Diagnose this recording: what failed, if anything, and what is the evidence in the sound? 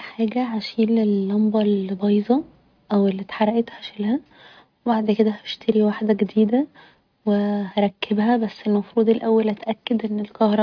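Nothing in the speech recording points to a failure at any stage of the chain. There is no audible event to attribute to wiring, conversion, buffering, processing, transmission, storage or playback.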